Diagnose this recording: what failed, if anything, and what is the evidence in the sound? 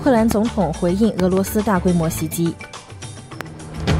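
Sharp loud pops cut through the sound, which continues beneath them: one at 0.31–0.34 s, a close pair at 1.20–1.40 s, and another at 3.41–3.43 s, each roughly 15 dB above the audio. The likely cause is voltage pulses in the analogue wiring from a plug, switch or static.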